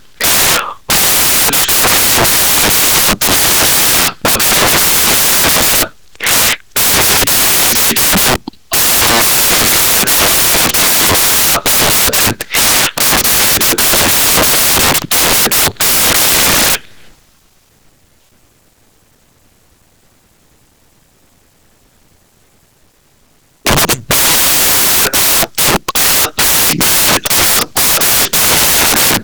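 From start to finish, samples built from the wrong bytes turn the speech into loud, harsh broadband noise. The low, fast-changing bits of each sample became its large part.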